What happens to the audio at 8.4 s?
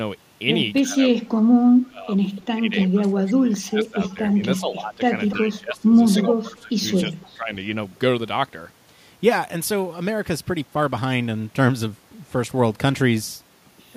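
Nothing goes wrong at 8.4 s; the speech plays through that moment intact, with no dropout, click or distortion.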